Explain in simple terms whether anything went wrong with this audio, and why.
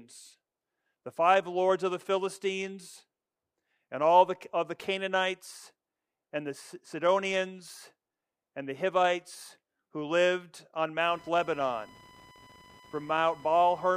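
Computer activity noise appears from about 11.08 seconds to the end of the speech. A buzzy, chirping whine, pulsing roughly a thousand times a second, sits under the talking. It comes from the computer itself: when its processor, graphics card or mouse suddenly works harder, the changing electrical load disturbs the ground wiring that the audio circuit shares. That disturbance leaks into the recording, following what the machine was doing rather than anything in the speech.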